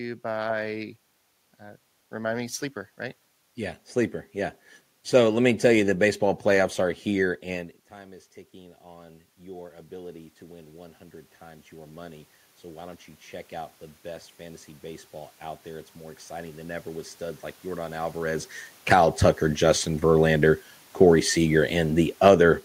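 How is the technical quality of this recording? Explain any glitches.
Two automatic gain control faults affect the recording.

From 7.5 to 19.3 s, just after "baseball playoffs are here", the talker moves away and the input drops about 16 dB. Automatic gain rising compensates with about 16 dB of boost, so voice and room noise slowly swell together.

From 21.84 to 22.42 s, automatic gain falling pulls the level down about 3 dB, so the sound dips along with its background.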